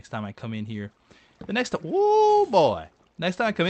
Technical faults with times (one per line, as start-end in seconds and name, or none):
none